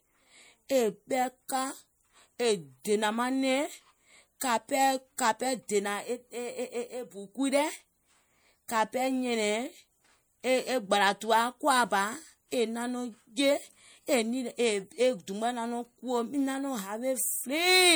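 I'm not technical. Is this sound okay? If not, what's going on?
No. The whole recording sounds watery and swirly, with metallic chirps on s sounds. That is likely MP3 compression squeezing the speech too hard. There is also pre-echo at 1.48, 4.40, 5.17 and 5.68 seconds: a brief hiss just before sharp sounds, which makes them soft.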